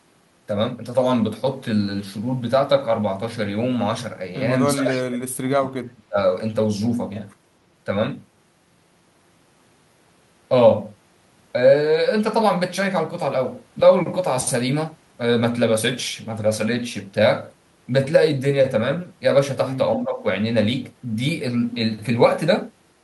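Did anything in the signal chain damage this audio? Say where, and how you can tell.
Yes. The speech drops away from 4.65 to 6.18 s, falling by roughly 35 dB at its deepest, and dips more gently, about 10 dB, from 19.96 to 20.22 s. This points to call processing, likely speech suppressed in double talk. The echo canceller mistook near-end speech for loudspeaker echo. It differs from a network dropout because the level is pulled down rather than cut off cleanly.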